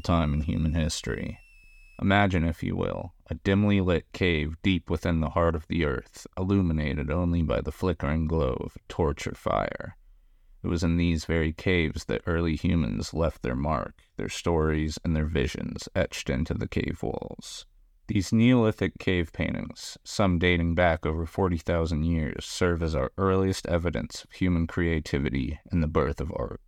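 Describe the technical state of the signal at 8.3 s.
At 8.3 s the signal is intact, with no audible dropout, distortion, glitch or other technical fault at that point.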